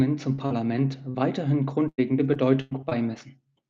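Speech with repeated packet loss (robotic sound) from 0.35 to 3.19 s. Eight gaps appear, the longest 97 ms. Each is patched by stretching the preceding sound, about 12% of the span. Roughly 0.4 s is rebuilt this way, leaving choppy speech with pieces missing.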